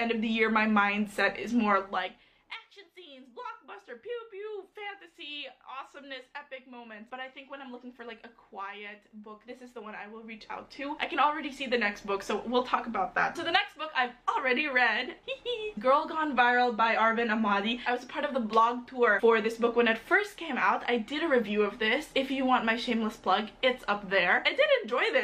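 Nothing stood out as a technical fault on listening, and the gradual level changes simply ride up and down smoothly, the way a fader move would.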